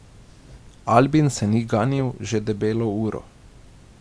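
Nothing stood out as a technical fault on listening to this speech recording.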